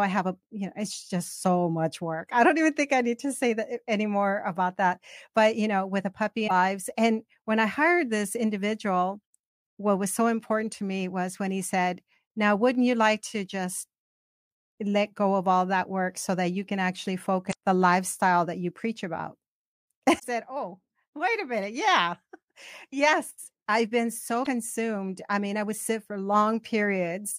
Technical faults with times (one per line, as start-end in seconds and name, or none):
6.44-6.51 damaged data in a compressed stream
17.49-17.54 damaged data in a compressed stream
20.15-20.24 damaged data in a compressed stream
24.41-24.47 damaged data in a compressed stream